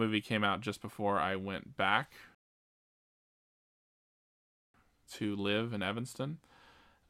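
Speech, with one clear rebuffering stall: at 2.35 s the audio just drops to dead silence and sits there until 4.74 s, then picks up exactly where it left off, with nothing skipped. That's the player running dry on downloaded data and waiting for more to arrive before carrying on. You don't lose any content, but the gap adds about 2.4 s to the playback time.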